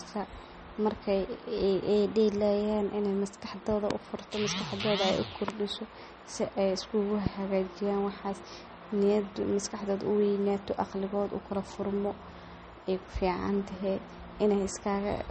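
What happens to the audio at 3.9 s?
A loud pop lands from 3.91 to 3.93 s, a single sharp click standing about 20 dB above the speech, which continues underneath. It is likely a sudden voltage step or pulse, from a plug, switch, static discharge or driver glitch, added to the signal and shaped by the circuitry after it.

MP3 compression damage is also plainly audible at this moment, as throughout: nothing remains above 8.4 kHz, and the sound has a watery, swirling quality with smeared attacks. This is likely a low-bitrate encode, around 32 kbps, dropping weak frequency lines that flicker between frames.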